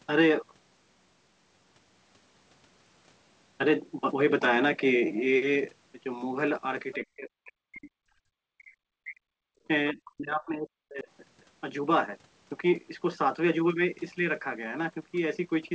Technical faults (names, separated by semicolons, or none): other side's voice leaking through; speech suppressed in double talk; background gated by the echo canceller